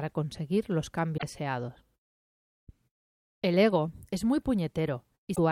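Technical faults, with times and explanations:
1.14–1.23 s (after "conseguir los") and 5.32–5.39 s, damaged data in a compressed stream: corrupted frames make the decoder lose sync, giving a brief disturbance at each spot.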